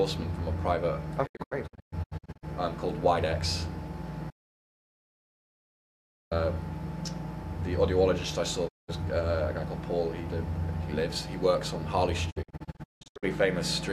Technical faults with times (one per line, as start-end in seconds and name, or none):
1.25-2.45 digital broadcast dropout
4.30-6.31 audio dropout to silence
8.67-8.90 digital broadcast dropout
12.29-13.25 digital broadcast dropout